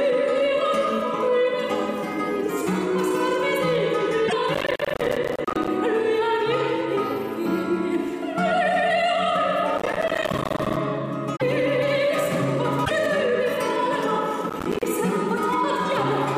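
At 4.25 to 4.33 s, damaged data in a compressed stream produces a short chirp, squawk, click or hole as the decoder loses frame sync. Processor overload crackle then runs from 4.55 to 5.68 s: dozens of missed buffers of around 10 ms each drop to silence, giving a burst of crackle or gritty tearing. The same crackle returns from 9.78 to 10.77 s. Further compressed-stream damage blips at 11.33 to 11.42 s and 12.82 to 12.91 s. A final, shorter crackle burst of about twenty missed buffers covers 14.50 to 14.85 s.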